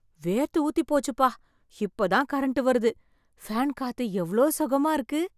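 No faults are audible anywhere in the speech.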